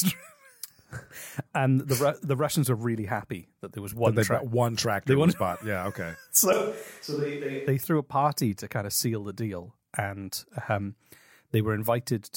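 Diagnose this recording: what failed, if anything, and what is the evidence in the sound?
At 6.53 s the speech turns abruptly roomy and hollow, loses its low end, drops by about 5 dB and carries more background noise, sitting roughly 30 dB below the speech. At 7.67 s it snaps back to the close sound. This is a switch to a distant microphone at the capture stage, likely because the close mic's signal dropped out so a further microphone carried the audio. A simple gain dip or EQ change wouldn't add the room reflections and raised noise floor.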